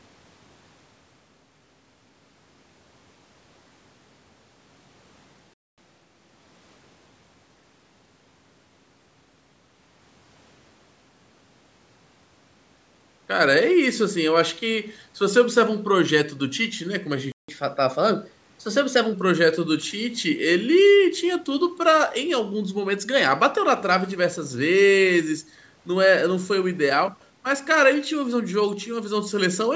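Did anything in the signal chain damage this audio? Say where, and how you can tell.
Yes. At the playback stage there are two playback stalls: silence from 5.54 to 5.78 s (241 ms) and from 17.32 to 17.49 s (165 ms). The sound resumes where it stopped, so nothing is skipped as with network loss. A starved or blocked player buffer is the likely cause.

Each stall is followed by catch-up at higher speed as the player resamples its backlog. From 5.78 to 6.74 s it runs at 1.25× speed, about four semitones sharp. From 17.49 to 19.14 s it runs at 1.1×, about a semitone and a half up. Tempo and pitch rise together and then settle, which separates this from a plain pitch shift.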